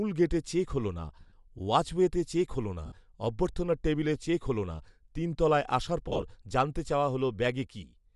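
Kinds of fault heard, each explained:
Bluetooth LC3 compression: a low-bitrate LC3 link likely zeroed the upper spectrum and filled it with noise, giving the speech a plainly audible breathy, grainy edge throughout.
Lost LE Audio frames: dropped frames made the decoder repeat the last spectrum with scrambled signs, leaving short noisy smears near 1.2, 2.86 and 6.1 s.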